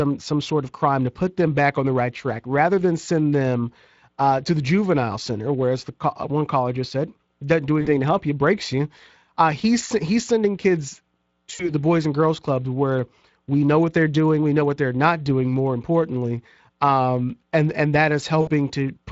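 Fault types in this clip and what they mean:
Speex codec: present throughout the clip. This CELP speech codec has only a limited bit budget for the excitation signal, so the speech comes out noticeably noisy and hoarse. The coarseness is plainly audible and fits a mid-range setting of about 20 kbps.
VoIP packet loss concealed by the speech codec: at 7.81–7.89 s after "just said doesn't do", 11.55–11.72 s after "he's sending kids", and 18.41–18.51 s after "um and and that". The decoder stretches its last pitch and filter into a fading fill, and the speech stays weak briefly afterwards.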